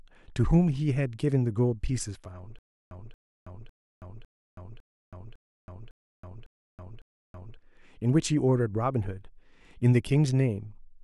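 Stutter with silent gaps runs from 2.59 s to 7.57 s of the speech. A burst of about 229 ms plays, then drops to digital silence for about 325 ms, and the same burst returns nine times at a steady 554 ms cycle. The cause is likely a stalled player or stream: each retry replayed the last buffered fragment and then ran dry, so the speech that belonged in that span never plays.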